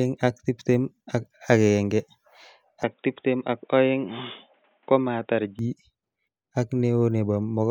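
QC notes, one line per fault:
2.83–5.59 s, input switched to a poorer device. Sound turns dull, cut off above 3.8 kHz, about 5 dB quieter, with faint new noise. Likely another microphone.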